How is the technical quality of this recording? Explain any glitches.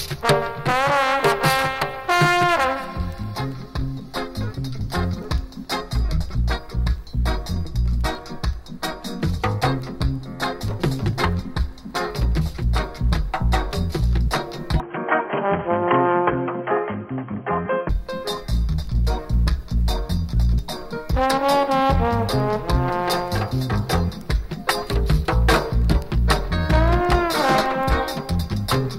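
There's one real glitch here. From 14.8 to 17.89 s the sound turns dull and boxy, with nothing above 3.2 kHz, a few dB level shift and a faint new noise floor, all without a gap. That's likely the input switched to a poorer device, then back.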